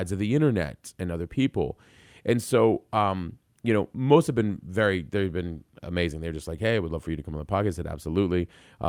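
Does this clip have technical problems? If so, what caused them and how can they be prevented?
No, nothing technical goes wrong in this speech recording, so there's nothing here that needs fixing or preventing.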